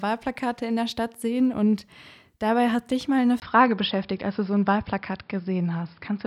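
At 3.4 s, after "hat dich mal eine", the input likely switched to a poorer device: a 20 ms gap, then speech dulls with nothing above 5.3 kHz and faint new noise.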